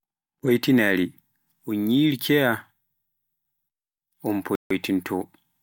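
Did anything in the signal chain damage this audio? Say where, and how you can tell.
Yes. At 4.55 to 4.71 s the speech cuts to about 150 ms of silence, then resumes, likely a Bluetooth stall: held wireless packets drained the headphone buffer.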